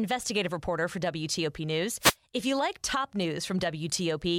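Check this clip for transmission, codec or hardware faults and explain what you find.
There's one fault in the speech here: a wireless microphone noise hit from about 2.00 to 2.15 s. The FM radio link fades briefly as reflected signals cancel, so receiver noise surges up over the voice, giving a short swish of static.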